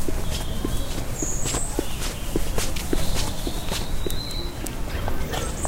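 A stretch of everyday sound is likely being played against the wrong clock, giving a section at the wrong speed: from 4.91 s to the end at 5.68 s it runs at twice its recorded speed. The sound suddenly turns hurried and jumps up by roughly ten semitones.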